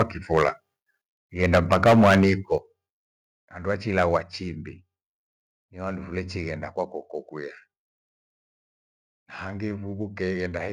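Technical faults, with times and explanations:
0.00–0.02 s, 0.33–0.49 s, 1.43–2.30 s and 3.98–4.17 s: microphone overload. The loudest peaks sound flattened and gritty, with a harsh crackle on top. The signal runs past full scale by about 10 dB, 6 dB, 13 dB and 4 dB in turn. The likely cause is an input level set too high, so the converter cuts the waveform tops flat. In the first and third spans a large share of samples is clipped, so the distortion is heaviest there.
1.58 s, 2.58 s and 4.17 s: microphone volume stepped down. Each time, the sound and its background drop suddenly in one step, by about 2 dB, 7 dB and 4 dB. The first drop falls inside a clipped span, and the third comes right as one ends. This likely comes from the call software turning down the device input after detecting overload. The 7 dB step at 2.58 s is the most obvious.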